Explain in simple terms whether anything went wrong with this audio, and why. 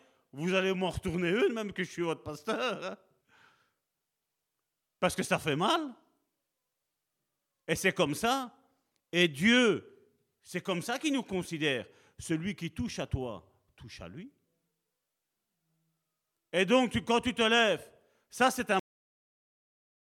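Yes, something went wrong at the end. Right after "lèves ça c'est un", at about 18.79 s, the speech just stops mid-sound and drops to dead silence with no natural fade. That's a cut-off end: the final stretch of audio never got written or played back.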